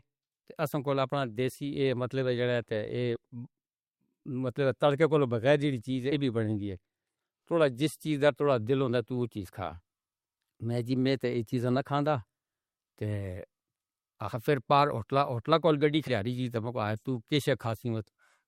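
At 3.15 s, 6.11–6.16 s and 16.07–16.12 s, compressed frames are skipped: the speech jumps forward by roughly 20, 70 and 40 ms, which fits whole 20 ms frames lost.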